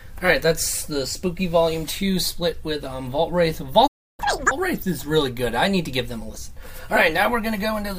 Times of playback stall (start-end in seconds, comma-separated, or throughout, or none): 3.87-4.20